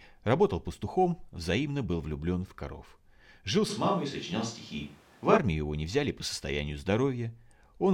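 A switch to a distant microphone runs from 3.71 to 5.36 s of this speech recording, starting just before "его не взяли по": the voice turns suddenly roomy and hollow, loses bass, and room noise sits roughly 30 dB below it, though level barely changes. The close microphone's signal likely dropped out.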